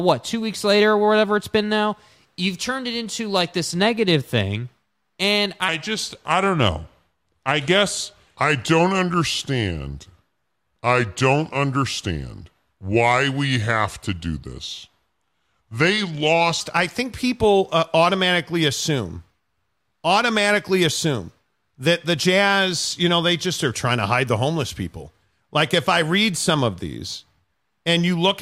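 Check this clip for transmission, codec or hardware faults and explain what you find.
One fault stands out: a section at the wrong speed from 5.68 to 16.61 s, ending just before "I think people uh". That stretch plays at 0.825 times normal speed, likely from being clocked at the wrong rate, so the speech sounds slow and deep, about three semitones lower. On a spectrogram, its harmonics sit visibly lower than the surrounding speech, and the waveform's syllables are stretched.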